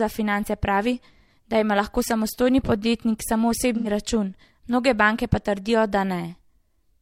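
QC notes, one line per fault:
3.77–3.88 s: AAC frame loss with concealment. About 85 ms turns smeared. The decoder rebuilt a gap fitting two lost frames from the previous spectrum.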